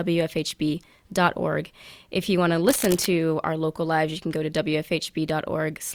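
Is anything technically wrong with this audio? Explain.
Yes. There is cable scratch noise from 2.68 to 3.07 s, just after "you want to" and just before "our local lives you". For about 0.4 s, a dense, ragged burst of noise sits over the speech, roughly 10 dB below it. The likely cause is a worn cable, connector or control being moved. Its contact resistance then jumps around rapidly and injects uneven noise into the signal. It is heard as a brief scratching, rustling layer on top of the speech.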